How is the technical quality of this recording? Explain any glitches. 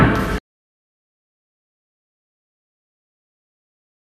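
The recording has one glitch. From 0.33 to 0.38 s there is DAB burbling: weak reception let a small fraction of bit errors slip past error correction into the MP2 data. Corrupted samples put short blips of noise in single sub-bands, and corrupted scale factors, where they get through, make individual sub-bands jump in level for up to a frame, giving a brief burble over the sound.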